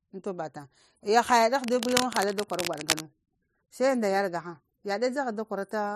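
From 1.62 to 3.02 s, a rough, uneven scratching and rustling runs over the speech, only a few decibels below it. This is cable scratch noise, likely from a worn cable, connector or control being moved so that its contact resistance jumped about rapidly. Unlike isolated clicks or a digital dropout, the disturbance is a dense, irregular stream of small noise bursts lasting over a second, and the speech continues underneath without gaps.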